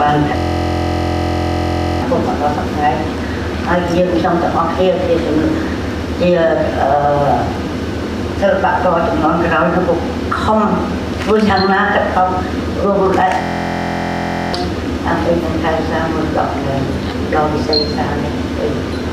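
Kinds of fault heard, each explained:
System hang loop: the system stalled while the audio hardware kept replaying one buffer, so a 23.22 ms fragment (fitting a 1024-sample buffer) repeats as a 43.1 Hz buzz at 0.37–2.02 s and 13.42–14.54 s, replacing roughly 1.5 s and 1 s of sound.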